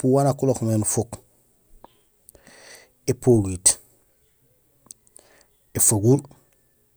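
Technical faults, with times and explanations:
3.46 s, dropped samples: a single sharp click in the speech, likely from a handful of samples going missing, well under a millisecond. The waveform jumps abruptly to a later value, and the spectrogram shows a thin vertical line spanning all frequencies.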